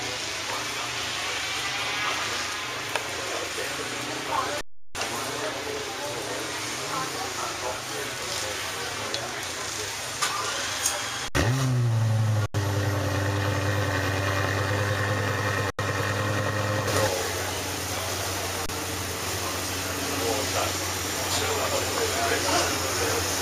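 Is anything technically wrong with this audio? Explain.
Yes. Underruns with held sample occur at 4.61–4.95 s (341 ms), 11.28–11.35 s (67 ms), 12.46–12.54 s (85 ms), 15.70–15.79 s (85 ms) and 18.66–18.69 s (29 ms). Each time the output buffer ran empty and the converter froze on its last value, so the sound flattens to a held level, starting without a sharp click. Audio was lost during each gap, roughly 300, 70, 100, 100 and 30 ms, so the sound resumes further along than where it stopped. The 341 ms and 85 ms gaps fit buffers of 16384 and 4096 samples.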